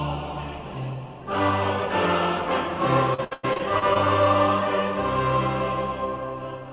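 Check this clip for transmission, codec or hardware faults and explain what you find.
One transmission fault is present. From 3.14 to 3.97 s, repeated packet loss (robotic sound) produces seven gaps, the longest about 101 ms. The receiver patches each by extending the previous sound, so roughly a third of that span is synthetic fill, heard as choppy audio with fragments missing. The whole clip is band-limited with nothing above 4 kHz, which fits a narrowband telephone codec such as G.711.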